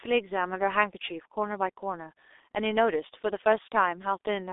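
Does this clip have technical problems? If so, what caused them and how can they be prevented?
Yes. Throughout, the speech sounds muffled and hoarse with smeared consonants, which fits heavy G.723.1 codec damage at around 6 kbit/s over a 300 Hz to 3.7 kHz telephone band. Prevent it with a wideband, higher-bitrate codec.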